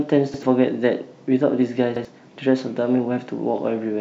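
At 0.34 s and again at 1.96 s the speech hits a repeated buffer: the playback side ran dry, so it replayed the last chunk of audio once more. Each repeat lasts about 85 ms, which fits a 4096-sample buffer, and you hear it as a quick stutter with a hard join where the copy starts. The real audio that should have filled the gap is gone, roughly a tenth of a second each time.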